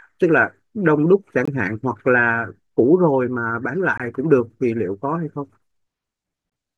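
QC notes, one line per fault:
1.45–1.48 s, 3.98–4.00 s, 6.50–6.52 s: gap between chunks. The speech stops dead for about 21 ms at each point, then resumes where it left off. The three holes fall about 2.52 s apart, one 2.5 s chunk plus the gap, so the audio was handled in 2.5 s segments and each join left a stretch of inserted silence.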